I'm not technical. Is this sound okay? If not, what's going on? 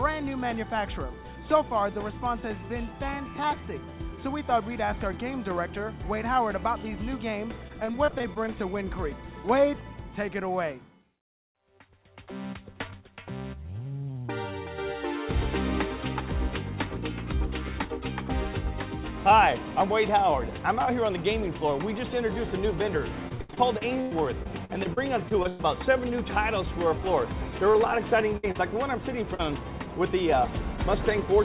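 No. The sound has gaps where pieces of the call never arrived, and the receiver had to cover them up.

The first problem is repeated packet loss, which gives a robotic sound. Between 7.68 and 8.48 seconds there are nine small holes, none longer than about 24 ms. Between 23.28 and 25.61 seconds there are fourteen, the longest about a tenth of a second. Each hole is patched by stretching the last sound. So these stretches turn choppy, with bits missing.

The second problem is short concealed packet loss. It happens three times: at 27.71 seconds, from 28.51 to 28.56 seconds, and from 29.34 to 29.41 seconds. Each gap lasts only a few hundredths of a second. The receiver fills it with a guess based on the sound just before, then blends back in. You hear a quick smear or wobble. A very short sound may simply disappear.

The third problem is a burst of packet loss from 28.37 to 28.45 seconds. 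About 60 ms went missing in one go. The last sound is held and fades while it waits. Then the audio picks up again further along, and the part in between is lost.

The whole clip also sounds a little muffled, like a phone line, with nothing above 4 kHz. That fits an ordinary telephone-style call codec.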